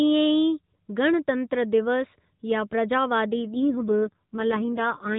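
From 3.34 s on, an AMR rate drop makes the speech buzzier and rougher, which fits a fall from 12.2 to 4.75 kbps. Unlike packet loss, there is no gap and no change of band.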